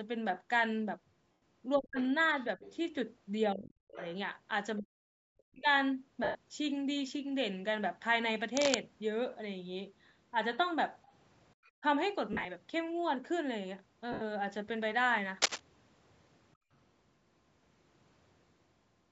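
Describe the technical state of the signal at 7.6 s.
At 7.6 s the speech is intact, with no fault at that moment; the sound carries the normal character of call microphone processing, with the lowest bass trimmed and nothing above 8 kHz.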